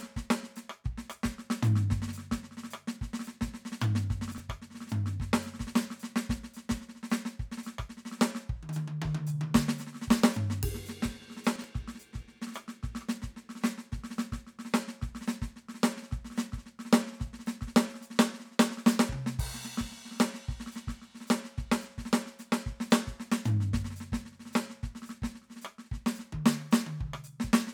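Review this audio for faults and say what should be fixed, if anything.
Two spots in the music have chunks out of order, at 4.32 to 4.40 s and 11.56 to 11.64 s: a 20 ms chunk lands three chunks late, so the passage jumbles briefly. Reorder chunks by sequence number before playback or writing.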